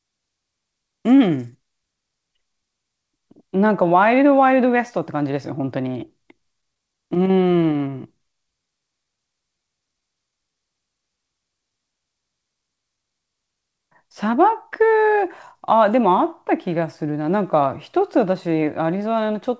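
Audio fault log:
5.92–7.82 s, scattered short gaps: about ten tiny packet holes, each 15 ms or less, were filled by continuing the previous sound. This causes ticks and smears, visible as brief repeated-cycle patches in the waveform.
7.90–10.56 s, jitter buffer slow-down: the receiver repeated pitch periods to rebuild its reserve, adding 155 ms. The audio runs at 95% speed with unchanged pitch, and the spectrogram shows stretched harmonics and repeated identical cycles.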